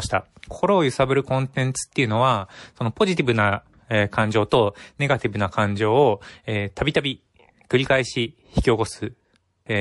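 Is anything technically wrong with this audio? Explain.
Yes, there are two problems. MP3 compression artefacts run through the whole speech clip, with the likely cause a low-bitrate MP3 encode, which fits about 48 kbps. With too few bits, the encoder cuts the treble and lets weak frequency lines drop in and out between frames, so the speech sounds plainly watery and swirly, with metallic edges on s sounds and smeared attacks.

Pre-echo appears at 4.50 s. The encoder spread quantisation noise across a whole block of roughly 48 ms that never switched to short blocks. Noise sized for a sharp attack leaked into the quiet just before it, rising about 10 dB as a brief hiss, and softening the onset.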